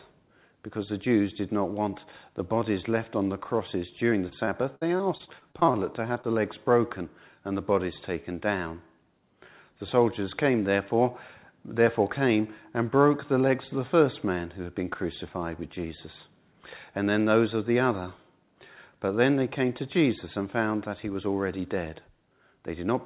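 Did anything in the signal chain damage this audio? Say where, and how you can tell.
Yes, at the network and jitter-buffer stage of the call path. From 4.1 to 5.75 s there is repeated packet loss that gives a robotic sound. About a dozen gaps fall close together, the longest around 60 ms, and concealment fills roughly a sixth of that stretch. Each hole is patched by extending the previous sound before the next loss arrives. The repeated synthetic fills give the choppy texture and leave parts of the sound missing.

Two short concealed packet losses follow, at 6.13 to 6.17 s and 6.21 to 6.25 s. Each covers about 20 ms of lost audio. The receiver bridges each hole by continuing the last signal and then crossfades back into the real stream. This leaves two brief smears or wobbles in quick succession. The band limit, with nothing above 4 kHz, comes from the call codec and fits G.711 mu-law at 64 kbps.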